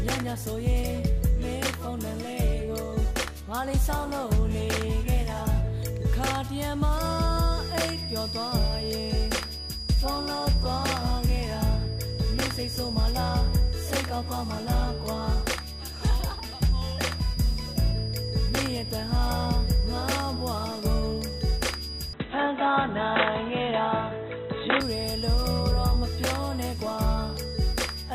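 A feedback whistle runs from 6.9 s to the end: a thin, single-pitch 4.9 kHz tone sits roughly 15 dB under the sound, slowly swelling and fading, likely from a loudspeaker-to-microphone loop hovering at the edge of feedback. An input switched to a poorer device dulls the audio from 22.13 to 24.80 s, with nothing above 3.9 kHz, a faint new noise floor, no level jump and no gap, likely a change to a narrower-band microphone or headset profile.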